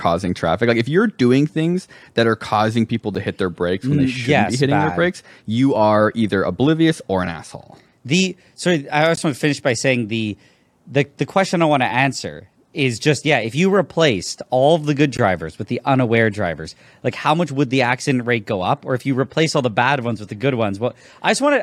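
Gaps at joins of encoded pieces interrupt this speech recording at 3.15, 9.16 and 15.17 s, every 6 s, each 9 to 16 ms. Separately encoded segments were joined untrimmed, leaving encoder delay and final-frame padding as silence.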